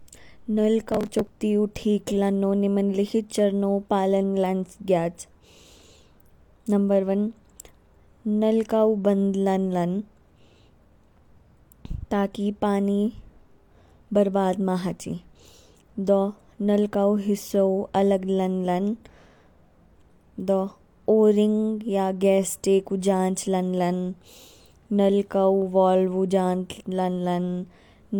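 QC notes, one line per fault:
0.92–1.30 s, processor overload crackle: for about 0.4 s the processor falls behind and misses deadline after deadline, and each late buffer, around 10 ms long, is skipped outright. Some thirty hard-edged skips merge into a gritty tearing, not one clean dropout.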